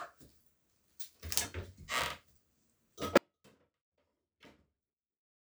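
At 3.18 s the audio dropout to a faint residue begins and runs to the end. The sound cuts off abruptly mid-flow, leaving only a faint trace of itself roughly 40 dB below its normal level. The likely cause is the wanted signal being lost while the path after the break stayed live. The sudden edge rules out a fade, and the lingering leak separates it from a clean dropout to digital silence.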